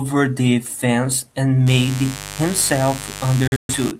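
Mains buzz runs from 1.67 s to 3.91 s, a steady, raspy 50 Hz buzz roughly 15 dB below the speech. Sharp switching spikes, twice per mains cycle, leaked into the signal path, so the harmonics climb well into the kilohertz range rather than staying a low hum.

Digital broadcast dropout strikes between 3.47 s and 3.78 s. The receiver stopped getting usable frames and muted, fading out in about 3 ms each time. About 171 ms of speech is gone across that 0.3 s stretch, in short holes, the longest 128 ms, which points to a few lost frames.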